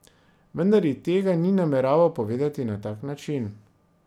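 No technical faults can be heard in this recording.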